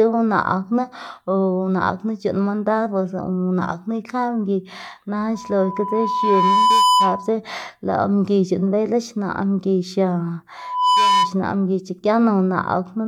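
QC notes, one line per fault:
5.34–7.34 s, loudspeaker feedback squeal: a 997 Hz tone swells over a second or so to about 5 dB above the speech, as the mic-to-speaker loop exceeds unity gain.
10.57–11.35 s, loudspeaker feedback squeal: the same 997 Hz tone returns, rising within a fraction of a second to about 5 dB over the speech.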